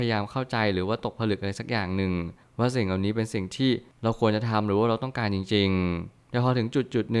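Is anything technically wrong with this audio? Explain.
No, nothing technical stands out in this speech recording, so there's nothing here to flag.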